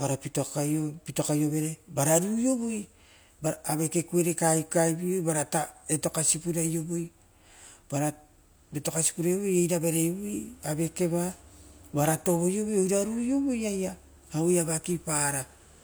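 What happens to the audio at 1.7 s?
Nothing goes wrong at 1.7 s; the speech runs on intact through that moment, with no dropout, click, distortion or other fault to be heard.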